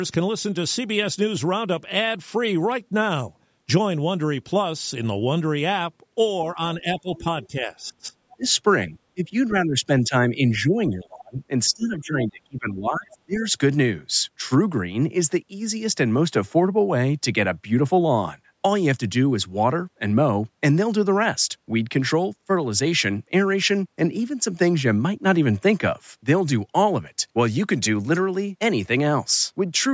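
From 6.55 to 8.46 s the speech drops by about 20 dB in patches totalling under a second. This is likely speech suppressed in double talk, where the echo canceller ducked the talker along with the echo. The waveform shows abrupt notches there, and the spectrogram shows faded bands.

From 7.0 to 7.47 s the other side's voice leaks through at about 25 dB below the speech, likely residual loudspeaker echo. It appears as a faint second set of harmonics on the spectrogram.

Suppression returns from 8.88 to 11.38 s (about 20 dB, roughly 1.5 s affected) and from 11.69 to 13.44 s (about 25 dB, roughly 1.5 s). A brief leak appears from 13.13 to 13.17 s, about 30 dB down.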